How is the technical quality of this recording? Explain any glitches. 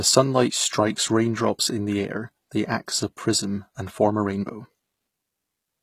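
The recording has plainly audible codec damage across the whole speech clip. Throughout, the treble sounds bright but synthetic, with gritty, lispy s sounds. This likely comes from HE-AAC compression: only the lower spectrum is coded and the highs are rebuilt by copying lower bands upward, which fits a very low bitrate around 20 kbps. Unlike ordinary low-pass dulling, the top end isn't missing, just metallic and misaligned.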